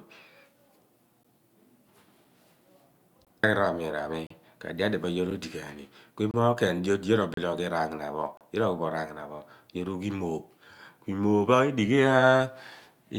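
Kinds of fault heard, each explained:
Gap between stream segments: consecutive one-second segments have timestamps that do not meet, so the player fills the gap with silence. Hard-edged holes of 3 to 37 ms recur about once per second from 1.23 s to 8.37 s, and no audio is lost.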